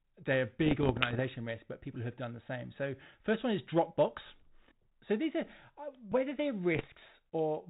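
Pops and rough, gritty bursts with brief jumps in level break up the speech from 0.62 to 1.21 s, 4.26 to 4.50 s and 6.75 to 7.04 s. These are bit errors on an ADPCM link, at around half a percent. Each flipped bit corrupts the decoder's step size and prediction, so the damage rings on for a few milliseconds. The band-limited G.726 ADPCM underneath fits a 32 kbit/s cordless-phone link.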